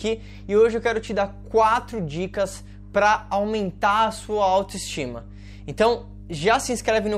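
From start to finish the speech sits on mains hum, a steady low tone at 50 Hz, about 20 dB below the speech level. Power-line current has leaked into the signal path, most plausibly through a ground loop or a nearby transformer, adding a constant drone beneath every pause. A spectrogram shows an unbroken horizontal line at 50 Hz with fainter low harmonics above it, and the waveform's quiet gaps carry a regular ripple instead of flat silence.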